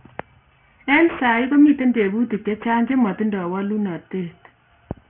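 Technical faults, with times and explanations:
Throughout, aliasing: sibilants and breathy consonants come out gritty and metallic, with harsh tones that don't match the speech, and the spectrum runs hard up to a wall at 3 kHz. The fold point points to the sample rate being dropped to about 6 kHz with no low-pass filter first, so the energy above 3 kHz mirrors back down as false frequencies, sitting well below the speech.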